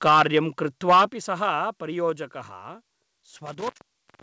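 Speech, carried over a call path with nothing above 8 kHz, which fits a wideband codec such as G.722. Microphone overload hits at 0.06 to 0.39 s and again at 0.89 to 1.05 s. Peaks run about 9 dB past the converter's limit. Their tops are flattened, giving a harsh, crackly edge. Roughly a tenth of samples clip in the first burst, about a fifth in the second. An input level set too high is the likely cause. The microphone volume is stepped down at 0.08 s and again at 1.08 s. Each time, voice and background drop together, first by about 3 dB, then by about 7 dB. Both steps follow distorted peaks. This points to the call software likely cutting the device gain in response to the clipping. An intermittent contact breaks the signal from 3.46 s to the end. The sound cuts out for about 0.61 s, with crackle at the edges and faint hiss in the gap. A loose cable or plug briefly opening would cause this.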